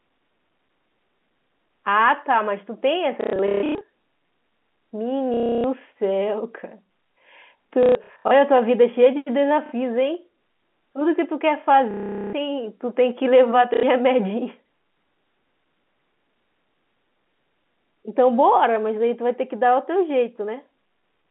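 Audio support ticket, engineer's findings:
Packet loss with last packet repeated at 3.21–3.81 s, 5.34–5.64 s, 7.83–8.31 s, 9.66–9.72 s, 11.91–12.33 s and 13.74–13.83 s. Robotic stutter, buzz near 33 Hz, which fits 30 ms packets. Receiver concealment replays the stale packet. Telephone band, about 200 Hz to 3.4 kHz.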